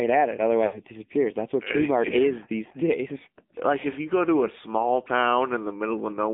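From the first moment to the last, the speech sounds thin, boxed-in and plainly buzzy, with a synthetic edge on every vowel. Nothing reaches below about 200 Hz or above about 3.6 kHz. This is the AMR narrowband mobile codec. It rebuilds speech from a vocal-tract model driven by sparse pulses rather than sending the waveform. The coarse, artificial grain points to one of its lower modes, around 7.4 kbps.

Just after "at it", from 0.66 to 0.80 s, the speech smears into a drawn-out, warbling tone that sinks toward silence. It then returns weak and rough for a moment. These are lost AMR speech frames. The decoder had no valid data, so it kept repeating its last good pitch and vocal-tract settings at falling gain. The gap fits about four 20 ms frames.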